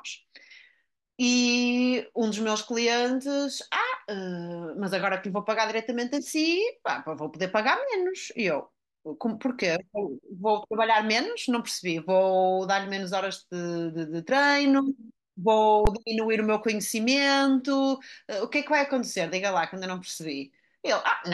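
At 15.85 s the speech drops out for about 15 ms in an underrun with held sample: the output buffer ran dry, so the converter held its last value and the waveform sat flat. Roughly that much audio was lost.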